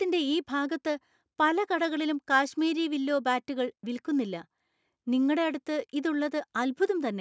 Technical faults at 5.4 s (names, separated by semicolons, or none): none